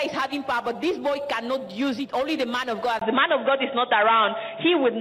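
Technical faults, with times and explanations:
2.99 s to end, input switched to a poorer device: after a 20 ms silence the sound turns dull and boxy, with nothing above 3.8 kHz, a level shift of roughly 5 dB and a faint new noise floor about 50 dB down, likely because recording moved to a narrower-band microphone or headset profile. A spectrogram shows a brief blank column, then energy abruptly capped at 3.8 kHz over a new noise haze. The waveform has a tiny gap and a step in amplitude.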